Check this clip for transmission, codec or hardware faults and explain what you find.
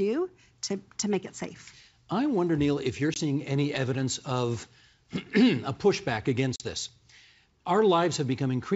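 The clip has one kind of fault, packet loss on an ADPCM call, heard twice in the speech, which is carried on G.722 wideband coding with its faint upper-band hiss.

Packet loss on an ADPCM call: at 3.14 s about 20 ms drops out, roughly one packet, and at 6.56 s about 40 ms goes, roughly two packets. Each hole is pure silence. The decoder's predictor and step size then lag the sender's, so the sound resumes with brief distortion before settling by 3.20 s and 6.64 s. A spectrogram shows a sharp-edged blank column, and the waveform shows a flat gap.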